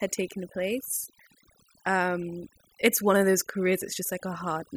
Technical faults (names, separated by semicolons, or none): overdone noise removal